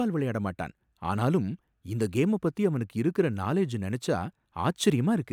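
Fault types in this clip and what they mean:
No fault types are present in this clip.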